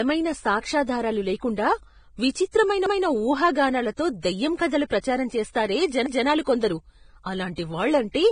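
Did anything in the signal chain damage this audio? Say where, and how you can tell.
Yes. Vorbis compression, heard throughout the clip, is the likely codec-stage cause: nothing survives above 9.7 kHz, and the speech sounds hissy and grainy, with roughened tones and smeared consonant attacks. Coarsely quantised treble residue like this points to a low Vorbis bitrate, around 23 kbps.

Overlapping chunks, at 2.86–3.06 s just after "సాక్ష్యాధారాలు లేకుండా విచిత్రమైన" and again at 6.06–6.26 s, come from the buffering or processing stage. Each 3 s chunk begins 200 ms before the previous one ends, so that stretch plays twice and produces an audible stutter at each join.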